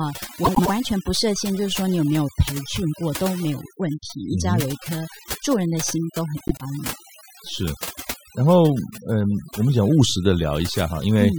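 Across the whole speech clip, overdone noise removal is at work: a noise reduction stage set far too aggressively pulls individual frequency bands down or out whenever they sit near its noise estimate. The background collapses into near silence with twinkling specks, and quiet parts of the voice go with them.

From 0.44 to 0.69 s, and again from 6.37 to 6.61 s, frames out of order occur. Two adjacent runs of roughly 0.1 s each, which fits four frames per run, were decoded in swapped sequence. Each stretch plays with its halves exchanged, giving a brief garbled flutter, though no time is lost.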